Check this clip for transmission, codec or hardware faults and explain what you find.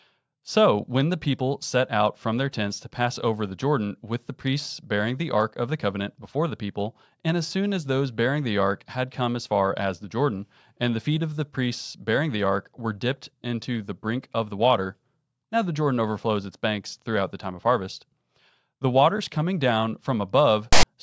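One fault is present. At 20.73 to 20.83 s, file tags play as audio. Text metadata is decoded as samples, producing a loud, lopsided rasp with abrupt edges.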